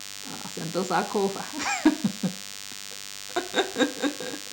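From start to finish the speech carries a DECT cordless phone buzz: a nearby handset or base station's radio bursts, 100 per second, are rectified by the audio circuitry into a thin, steady buzz fairly close in level to the voice. A spectrogram shows evenly spaced horizontal lines at 100 Hz and its many harmonics.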